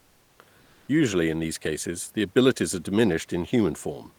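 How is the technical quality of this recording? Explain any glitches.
Two short stretches of comfort noise in place of the background, both in pauses. From 0.00 to 0.39 s and from 0.61 to 0.87 s, the real room noise, which sits about 38 dB below the speech, gives way to a steady, featureless hiss. The likely cause is discontinuous transmission, which fits Opus DTX. The sender stops during silence, and the receiver fills the gap with synthetic noise. That noise is about 4 dB quieter in the first gap and about 3 dB louder in the second.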